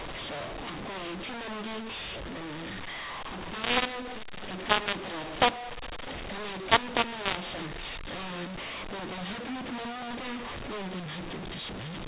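A-law telephone speech is being decoded as mu-law, a mu-law and A-law mix-up, so levels are scrambled throughout: harsh, distorted speech with noise filling every pause.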